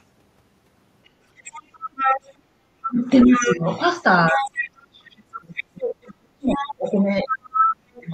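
From 1.05 to 2.3 s, the other side's voice leaks through, a few decibels under the talker. It likely comes from loudspeaker echo that the echo canceller left in the microphone signal. A brief scrap returns at 2.83 to 2.88 s, quieter. From 2.86 to 3.64 s, speech is suppressed in double talk. With both sides active, the canceller likely could not tell them apart and turned the talker down. The voice dips by up to roughly 20 dB, for about 0.4 s in total. The leaking voice comes back from 3.21 to 3.78 s, and again from 4.27 to 4.7 s. A much longer suppression then starts at 4.32 s and runs to 8.08 s. The talker drops in pieces, by as much as roughly 40 dB, for about three seconds in total. Inside that stretch, a faint burst of the other side sits at 5.56 to 5.64 s. From 6.49 to 8.01 s, the leaked voice is about as loud as the talker.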